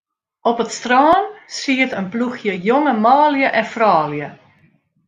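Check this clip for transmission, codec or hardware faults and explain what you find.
One codec fault is present in this speech clip. At 2.56 s, between "strân siet in ploechje" and "jonge manlju en", a brief glitch cuts in. This is damaged data in a compressed stream: part of the encoded data there was damaged, so the decoder misread that frame, lost synchronisation and hunted for the next valid frame header. The garbled decode produces the glitch.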